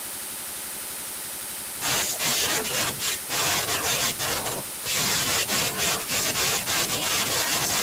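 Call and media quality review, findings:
No findings in this call and media quality review.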